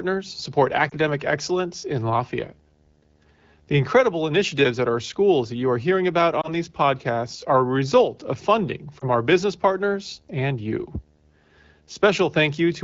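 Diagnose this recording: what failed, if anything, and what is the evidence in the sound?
Lost AMR speech frames at the network stage: radio errors caused single frames to fail their checksum, so the AMR-WB decoder filled each gap by reusing the last good pitch and vocal tract settings at reduced gain. Each is a brief dip or warble in the speech at 0.89–0.94 s, 6.42–6.51 s and 9.00–9.05 s, consistent with one lost 20 ms frame each time. The clear wideband sound around them fits AMR-WB at about 12.65 kbit/s.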